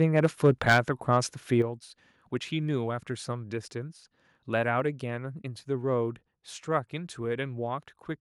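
From 0.01 to 0.78 s the loudest peaks crackle with flat-topped harshness, likely microphone overload driving the converter about 10 dB past its limit. Unlike codec grit, only the peaks break up. At 1.62 s and again at 4.8 s, voice and background drop together in a single step, by about 7 dB and then about 2 dB, likely the microphone volume stepped down by the call software. A fade would ramp instead.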